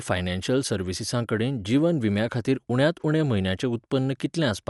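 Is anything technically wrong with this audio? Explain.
Yes. Throughout the speech there is plainly audible codec damage, likely from Dolby Digital compression at a low bitrate, consistent with about 64 kbps. The encoder drops content above 11.4 kHz, so the spectrogram shows a hard flat ceiling there, and the speech sounds dull.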